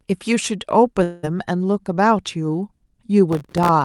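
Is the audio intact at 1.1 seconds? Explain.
No, from 1.03 to 1.25 s a long network dropout likely cut about 200 ms, which concealment fills with a fading buzz. Unlike a brief packet-loss glitch, the gap is long and nothing resumes seamlessly.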